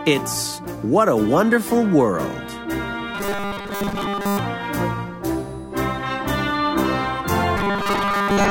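From 3.15 to 4.39 s, and again from 7.57 s to the very end, the sound turns into a rigid, metallic buzz pinned at about 200 Hz. That's robotic sound from repeated short buffers. Fresh audio is likely arriving too slowly, so the playback keeps looping a tiny 5 ms slice instead, skipping most of the real material. The 5 ms loop is exactly what forces that steady 200 Hz drone, though the buzz still loosely tracks the original audio's shape.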